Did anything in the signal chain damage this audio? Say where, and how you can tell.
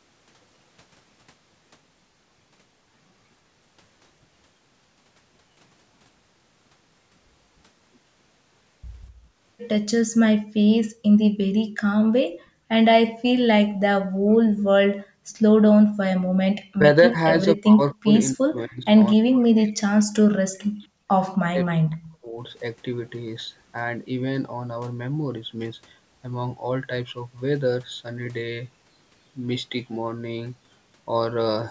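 Yes, in the call processing stage. Background gated by the echo canceller: the room sound drops by about 33 to 40 dB at 12.29–12.7, 13.1–13.24, 13.68–13.81, 14.94–15.34 and 15.86–16.33 s. The canceller clamped the microphone while the far end played, then released it.

Speech is suppressed in double talk, also in call processing. The talker dips by roughly 40 dB at 14.1–14.43, 21.4–22.39, and in pieces totalling about three seconds across 16.61–21.06 s. This is likely the canceller mistaking the talker for loudspeaker echo.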